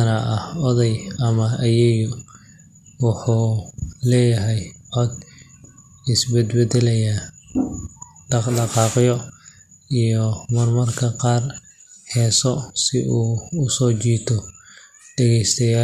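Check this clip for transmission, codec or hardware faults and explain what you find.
No faults turn up in this clip.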